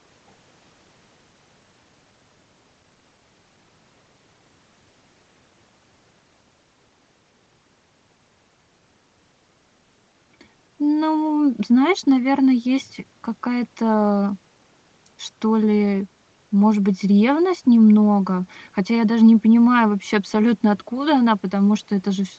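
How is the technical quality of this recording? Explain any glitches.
The technical quality of this recording holds up, with no glitches to explain.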